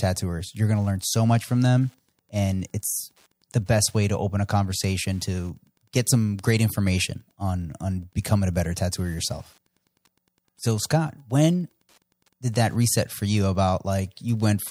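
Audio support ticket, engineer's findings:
Faint steady ticking under the speech, about ten ticks per second, whole clip. Wi-Fi interference: nearby Wi-Fi radio's beacon every 102.4 ms rectified by the audio circuit, producing a regular tick well below the speech level. Check cable shielding and router placement.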